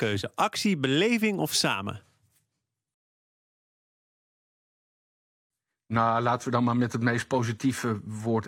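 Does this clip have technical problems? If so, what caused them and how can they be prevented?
Yes. At 2.94 s the player's buffer ran dry, a rebuffering stall, so playback halted until more data downloaded. The speech drops to silence until 5.50 s, then resumes where it stopped, adding 2.56 s with nothing lost. Buffering more ahead or dropping to a lower bitrate would prevent it.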